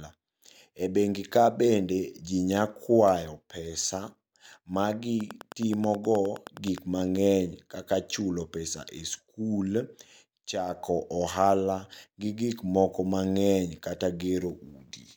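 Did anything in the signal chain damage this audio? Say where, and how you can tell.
Yes. A train of clicks runs from 5.21 to 6.79 s, ending just before "mang'eny kaka chulo pesa". It is around fifteen same-shaped ticks at a regular 9.5 per second, peaking about 5 dB above the speech. That steady pulse train likely comes from interference coupling into the analogue wiring.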